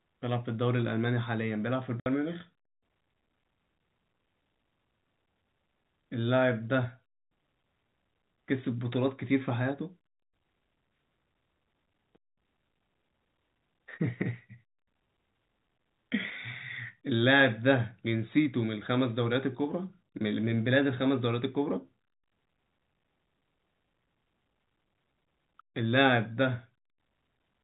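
At 2.0 s the speech drops out for about 60 ms, a case of packet loss filled with silence. The receiver just played nothing for the missing stretch, which fits three 20 ms packets going astray, so you get an abrupt hole with hard edges in otherwise band-limited G.711 telephone audio.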